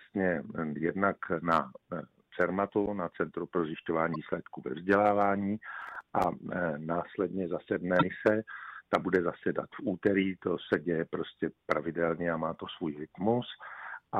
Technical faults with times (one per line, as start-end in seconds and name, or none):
4.12-4.16 damaged data in a compressed stream
5.82-6.24 processor overload crackle
7.98-8.03 damaged data in a compressed stream